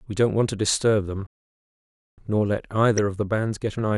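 At 1.27 s the speech drops out until 2.18 s, a gap of about 0.91 s that is likely a playback stall; the waveform shows flat silence and the spectrogram a blank column. At 2.97 s a corrupt frame decoded as a brief chirp or blip, visible as a thin vertical smear of misplaced energy across a few frames.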